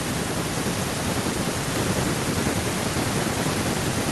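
Speech, with no technical faults audible anywhere.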